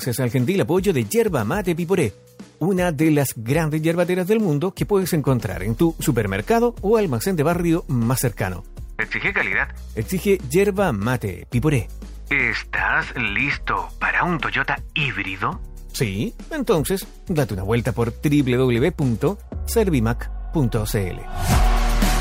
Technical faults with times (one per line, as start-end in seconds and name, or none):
none